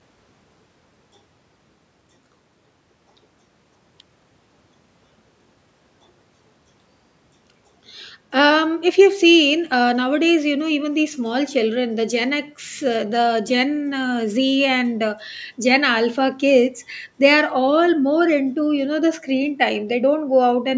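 No technical faults can be heard in the speech. It has passed through a call's microphone processing, which leaves nothing above 8 kHz and trims the lowest bass as intended.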